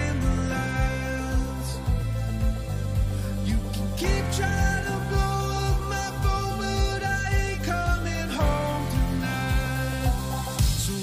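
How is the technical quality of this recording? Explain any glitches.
The technical quality of this recording is sound, with no glitches to explain.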